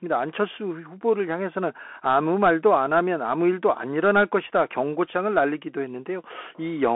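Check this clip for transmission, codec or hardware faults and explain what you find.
One fault runs through the whole clip: Bluetooth CVSD headset codec. The one-bit slope coding, which fits a 64 kbps link, leaves nothing above 3.8 kHz, grainy hiss underneath, and scratchy, overloaded sibilants.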